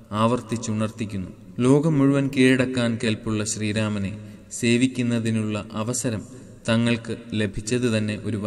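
No technical faults can be heard anywhere in the audio.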